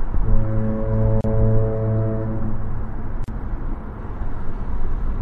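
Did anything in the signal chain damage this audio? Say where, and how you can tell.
Yes. Damage is audible at the codec stage throughout. The sound is watery and swirly, with smeared attacks. That points to MP3 compression, likely at a low bitrate around 64 kbps, where starved frequency lines drop in and out between frames.

Gaps at joins of encoded pieces point to the storage stage. Short silences cut into continuous sound at 1.21 to 1.24 s (33 ms) and 3.24 to 3.28 s (38 ms), two seconds apart. The codec smears their edges. Separately encoded segments kept their encoder delay and end padding.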